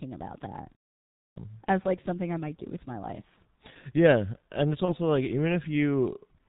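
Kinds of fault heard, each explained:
G.723.1 codec: Throughout the speech runs through this early low-rate telephony codec at about 6.3 kbit/s in 30 ms frames. Nothing above 4 kHz survives and its slowly updated voice model smears detail, so the speech sounds heavily muffled and hoarse, with blurred consonants.
Clipped start after a pause: At 1.22 s, after "about that" and a pause of about half a second, the output device has dozed off and needs time to wake. About 142 ms of the next phrase is swallowed, so it starts abruptly without its first sounds.
VoIP packet loss concealed by the speech codec: At 4.85 s, right after "and it's", one 30 ms frame is missing. The decoder fills the gap by extending its last pitch and filter at falling gain, giving a brief fading stretch, and the speech stays weak just afterwards.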